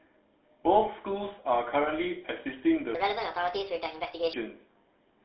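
The speech has passed through a GSM full-rate codec, whose coarse pulse-driven excitation at roughly 13 kbps leaves a buzzy, gravelly roughness over the whole recording, with the line band running from 250 Hz to 3.6 kHz and nothing above 4 kHz. From 2.95 to 4.33 s a section at the wrong speed, likely from playback against a mismatched clock, runs 1.51 times too fast, so the speech there turns hurried and jumps up by about seven semitones before dropping back.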